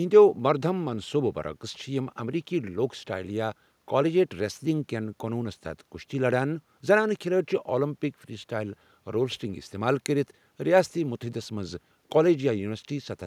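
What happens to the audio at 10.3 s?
Nothing goes wrong at 10.3 s: the speech carries on cleanly through that moment with no dropout, click, distortion or other fault.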